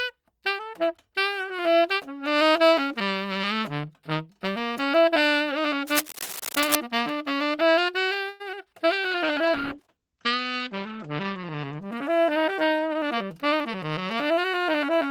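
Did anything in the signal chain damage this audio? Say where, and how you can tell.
Yes. From 5.87 to 6.75 s there is cable scratch noise in the analogue wiring: dense, irregular scratching and rustling laid over the sound at about 5 dB below the signal. On a spectrogram it shows as broadband, ragged vertical streaks, and the waveform carries spiky, uneven bursts on top of the program. That pattern points to a worn cable, connector or control being moved, with its contact resistance fluctuating rapidly. That is the likely cause.

A call audio freeze sits in the network and buffer stage, from 8.29 to 8.42 s. For about 105 ms the last sound is stretched into a decaying buzz rather than dropping out. Nothing is lost, but the audio resumes exactly where it stopped, 105 ms late. On a spectrogram the final spectral slice smears horizontally and fades. This likely means packets arrived late and the jitter buffer ran dry.

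Short concealed packet loss follows at 8.52 to 8.55 s, again from the network. Roughly 20 ms of audio never reached the decoder in time. Only about 8 ms of it was patched by extrapolating the preceding sound, so what you hear is a brief smear. The spectrogram shows a thin blurred column with a slight discontinuity. The waveform shows a short, overly regular stretch before it blends back into the real signal.

A call bitrate drop in the codec stage runs from 9.11 to 13.69 s. The encoder fell from 40 kbps to 11 kbps and stayed at its lowest for about 1.9 s. The sound turns rough, watery and muffled as the coding coarsens. On a spectrogram the top band vanishes: the content that reached 20 kHz is cut off sharply at 8 kHz. The remaining area also looks blocky and smeared until the rate recovers.

A jitter buffer speed-up in the receive buffer overlaps the end of that stretch, from 12.56 to 13.68 s. 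Playback runs at about 110% speed with pitch unchanged, so the sound feels hurried. The receiver trimmed pitch-period-sized pieces repeatedly, removing about a tenth of a second in total to reduce built-up delay. In the waveform whole cycles are cut out while the remaining cycles keep their length. The spectrogram's harmonics stay at the same height while events arrive closer together.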